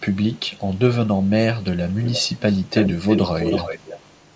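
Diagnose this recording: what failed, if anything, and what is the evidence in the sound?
Echo leak in call processing, likely an echo canceller passing loudspeaker pickup: faint 416 ms repeats at 0.11–0.79 and 1.11–1.31 s, then nearly full-level 324 ms echo from 1.61 s on.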